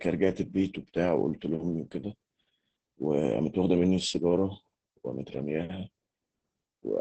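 Opus voice compression runs through the whole speech clip. The SILK linear-prediction coder coarsely quantises the excitation, leaving the voice hoarse, muffled and faintly robotic. Nothing remains above 8.3 kHz, a wideband cut that, with damage this heavy, fits a bitrate around 10 kbps.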